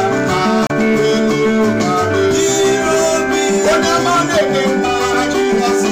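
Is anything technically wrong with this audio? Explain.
Yes, there is one fault: damaged data in a compressed stream, from about 0.67 to 0.71 s. For those 40 ms the bytes feeding the decoder are wrong, so it misreads the affected frame, loses sync and has to hunt for the next valid frame header before sound resumes. The result is a brief chirp, squawk, click or short hole. It lasts a few tens of milliseconds.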